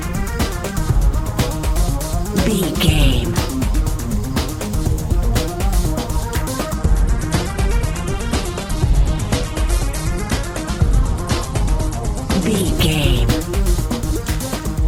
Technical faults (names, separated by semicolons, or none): adaptive stream at a lower bitrate